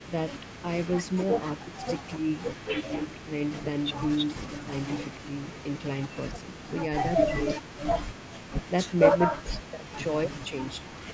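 From 0.52 to 5.65 s a faint, delayed copy of the speech trails about 0.27 s behind, very low in level; this is likely an echo leak from a loudspeaker that the far end's echo canceller failed to remove. From 0.6 to 10.95 s the speech repeatedly dips or drops out, at worst almost to silence and for about three seconds in total, likely speech suppressed in double talk, where the echo canceller turned the talker down while both sides spoke.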